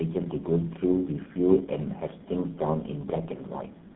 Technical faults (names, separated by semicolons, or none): tandem speech coding